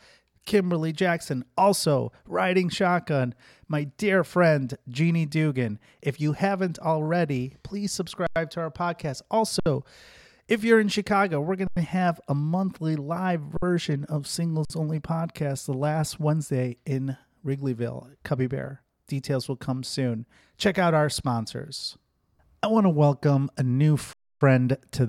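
The output buffer ran empty six times, at 8.27, 9.60, 11.67, 13.57, 14.65 and 24.13 s. Each time the converter held its last sample, an underrun with held sample. The speech stops dead on a flat level for 50 to 93 ms, and for 280 ms at 24.13 s. The 93 ms gaps fit a 4096-sample buffer. Playback resumes where it paused, so each gap ends softly, without a sharp click.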